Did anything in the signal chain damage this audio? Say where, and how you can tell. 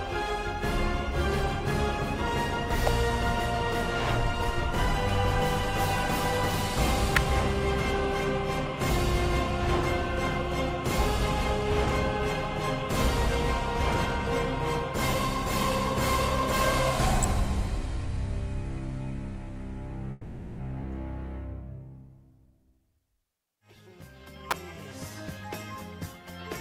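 Yes. Electrical switching spikes in the analogue wiring: sharp snaps at 2.87, 7.17, 17.23 and 24.51 s. Each is likely a nearby switch arcing onto the line.

A call audio freeze at 20.11 to 20.61 s. The last sound drones and fades for 470 ms. Likely delayed network packets emptied the jitter buffer. Nothing is lost.

A skip ahead at 20.82 to 20.86 s. Playback jumps forward and drops about a fifth of a second. The two sides join almost seamlessly.

A jitter buffer speed-up from 22.30 to 23.57 s. Sound runs at 115% speed with unchanged pitch. Short pitch periods totalling roughly 200 ms were cut.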